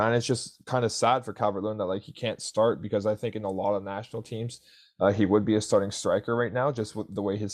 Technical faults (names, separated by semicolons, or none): none